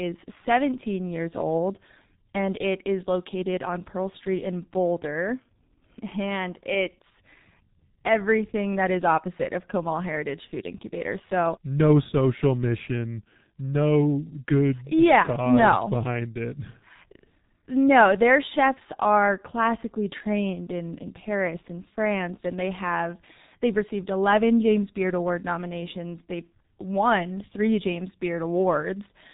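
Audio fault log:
Throughout, G.723.1 codec: nothing passes above 3.8 kHz, so the speech sounds muffled and hoarse. Heavy coding damage blurs consonants, consistent with about 6.3 kbit/s.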